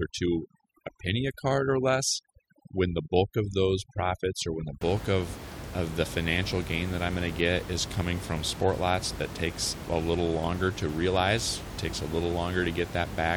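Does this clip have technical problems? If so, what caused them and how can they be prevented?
Yes. From 0.0 to 4.81 s, ending just before "of of the financial", there is overdone noise removal. A noise reduction stage set too strong pulls single frequency bands down or off whenever they sit near its noise estimate. The room noise, about 11 dB below the speech, drops and breaks into twinkling, warbling specks, and quieter parts of the speech are removed with it. Lowering the reduction amount, or recording somewhere quieter so less suppression is needed, prevents this.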